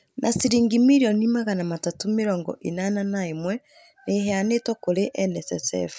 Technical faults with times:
none

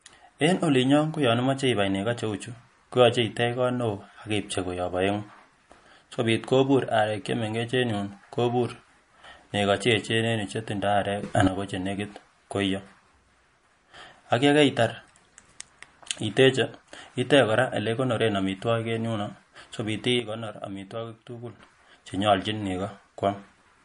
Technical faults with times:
0.00-23.84 MP3 compression
11.23-11.48 sudden gain jump
20.20-21.59 sudden gain jump

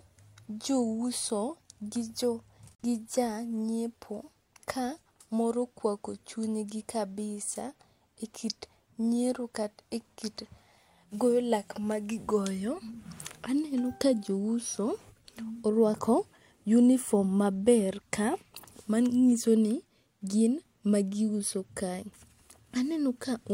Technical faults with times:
2.75-2.84 digital broadcast dropout

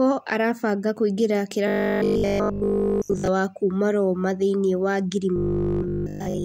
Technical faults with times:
1.68-3.28 robotic sound from repeated short buffers
5.36-6.44 robotic sound from repeated short buffers

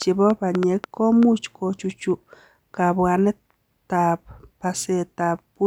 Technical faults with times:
0.02-1.24 train of clicks

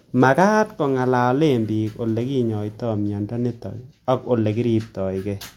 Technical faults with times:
3.05-4.55 resampler restarted on every block

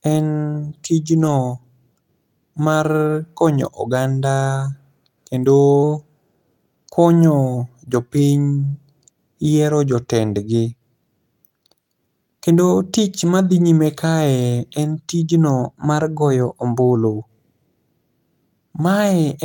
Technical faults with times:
1.21-1.27 lost packet rebuilt from error correction
5.83-6.41 drift correction step
7.88-7.90 lost packet rebuilt from error correction
10.64 lost packet rebuilt from error correction
15.62-16.96 drift correction step
17.14-17.16 lost packet rebuilt from error correction

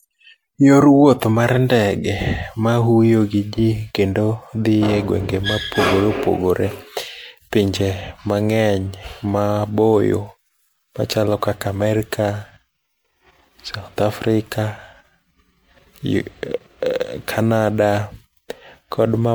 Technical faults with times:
0.00-19.34 generation loss

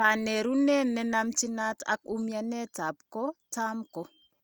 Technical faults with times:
none

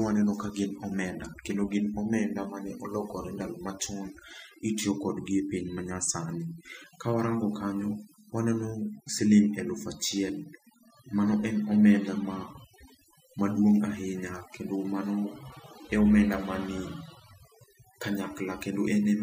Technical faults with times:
0.00-19.23 overdone noise removal

